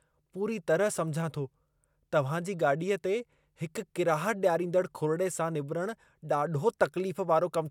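A speech recording with no audible technical fault anywhere in the signal.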